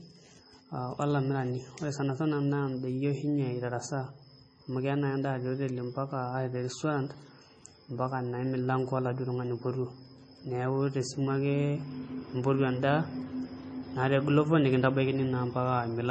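Heavy MP3 compression runs throughout the speech, likely from a bitrate near 24 kbps, so nothing reaches above 9 kHz and it sounds watery and swirly.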